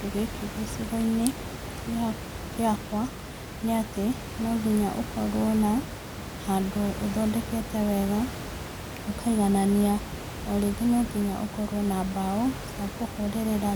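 No technical faults can be heard in the speech recording. Background noise from the room sits about 10 dB below the speech, and it belongs to the recording itself rather than to any fault in the system.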